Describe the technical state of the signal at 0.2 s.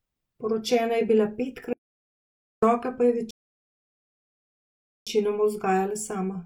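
At 0.2 s the speech signal is intact, with no audible dropout, distortion, glitch or other fault at that moment.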